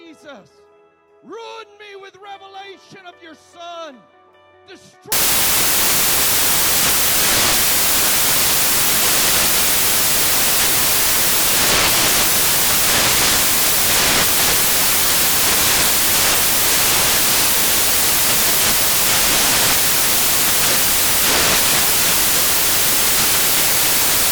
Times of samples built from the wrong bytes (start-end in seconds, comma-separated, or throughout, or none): 5.12-24.32